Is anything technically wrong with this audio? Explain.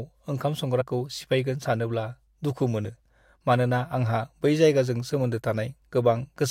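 Yes, the speech has two short dropouts where compressed frames were skipped, at 0.80 s and 2.85 s. Each time, about two whole frames, roughly 50 ms of audio, never play, so the sound jumps ahead. A spectrogram shows a vertical discontinuity in the harmonics, and the waveform shows a jump in the envelope at each join.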